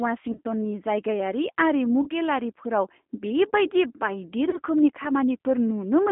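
From the start, the speech has that G.729 codec sound, the narrow, slightly rough and synthetic quality that points to an 8 kbit/s line. The band runs only from about 200 Hz to 3.5 kHz, so it's thin and boxy throughout.

Then there are three spots of VoIP packet loss concealed by the speech codec, at 0.32 to 0.41 s, 2.03 to 2.09 s and 4.50 to 4.61 s. Each gap is about 30 ms of missing audio, which fits a single dropped packet. The decoder stretches what came before into a buzzy tone or coloured noise that fades, and the sound stays weak or distorted until it settles.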